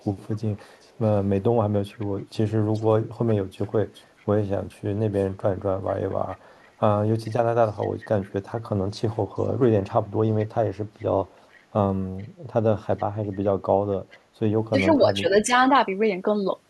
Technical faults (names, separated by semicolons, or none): echo leak; speech suppressed in double talk